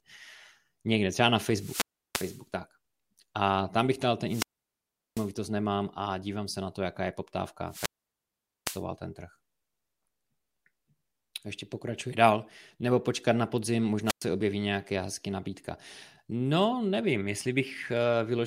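At 1.47 to 2.46 s, 4.26 to 5.31 s, 7.67 to 8.84 s and 14.05 to 14.26 s the speech suffers wireless microphone squelch dropout: the FM link weakens, hiss swells, then the receiver's squelch gates the output shut for about 0.33 s, 0.74 s, 0.81 s and 0.11 s respectively before the voice returns. A waveform shows flat-lined gaps; a spectrogram shows broadband noise haze, then blank columns.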